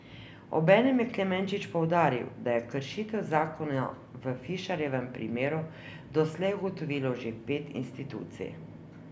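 No technical faults are audible anywhere in this clip.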